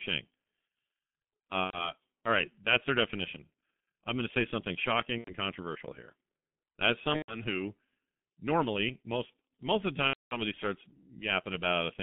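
Throughout, the speech carries heavy G.723.1 codec damage. The band runs from 150 Hz to 3.5 kHz, and the coarse, slow coding, consistent with about 6 kbit/s, leaves it muffled and hoarse with smeared consonants. VoIP packet loss concealed by the speech codec occurs at 1.65–1.91 s before "all right that's their", at 5.18–5.32 s between "going to say something" and "controversial here", at 7.16–7.43 s, and at 10.07–10.36 s after "most most of the". The gaps are roughly 90, 90, 120 and 240 ms. In each, the decoder extends the last sound into a fading buzzy tone or coloured noise that is muted from the third lost frame, and the sound stays weak briefly afterwards.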